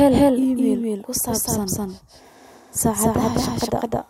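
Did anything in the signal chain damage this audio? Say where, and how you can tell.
Yes: a doubled audio track runs throughout. Every syllable repeats roughly 200 ms later at about the same level, full-band, with no decay or room colour, unlike acoustic echo. It is likely a second, slower capture path in the driver or buffer routing.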